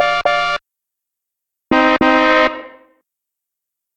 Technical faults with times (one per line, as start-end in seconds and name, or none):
0.00-3.96 periodic clock jitter